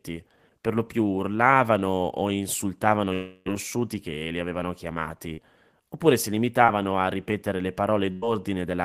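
A speech recording. From 3.13 to 3.48 s, the last sound is drawn out into a buzz or hiss that fades for about a third of a second and drops to a brief near-silence. Speech then picks up further along, with roughly 320 ms of material gone. This is likely a long network dropout: nothing reached the receiver for that stretch, so it could only extend what it last had before giving up. Two much shorter blemishes follow, at 5.34 to 5.39 s and at 6.65 to 6.70 s. Each is a quick smear or wobble lasting a few hundredths of a second, and a brief sound can drop out inside it. These are short concealed packet loss. About 40 ms and then 20 ms of audio failed to arrive in time, and the decoder covered each hole by continuing the preceding sound, pitched if it was voiced and as shaped noise if not, before blending back into the real signal. Near the end, from 8.12 to 8.24 s, the sound stalls into a held tone or hiss that fades over about a tenth of a second, and the speech resumes slightly further on. 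That is a burst of packet loss. Around 100 ms of consecutive audio was lost or came too late, and the receiver stretched and faded the last sound across the gap.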